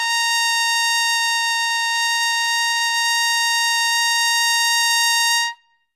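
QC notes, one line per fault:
throughout, WMA compression: likely a heavy low-bitrate encode, consistent with about 24 kbps, spreads quantisation noise; the music rings and washes, the hiss breathes, and nothing remains above 15.3 kHz.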